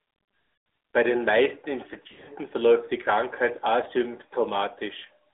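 Throughout, the AMR narrowband mobile codec limits the speech to roughly 300 Hz to 3.6 kHz, consistent with AMR-NB at about 10.2 kbps. It sounds plainly buzzy and synthetic, and a spectrogram shows nothing above 3.6 kHz.

From 0.54 to 0.66 s, lost AMR speech frames, about 120 ms of them, leave the decoder repeating the last good sound at falling gain. This is heard as a drawn-out, fading smear. A waveform shows a decaying envelope.

From 2.08 to 2.31 s, scattered frame losses, with the longest run 60 ms, cause warbling dips. On a spectrogram these appear as smeared, repeated harmonic stretches.

At 3.84 to 3.89 s, a single lost frame gives a brief dip.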